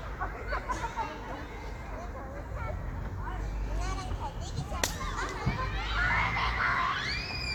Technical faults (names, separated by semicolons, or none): none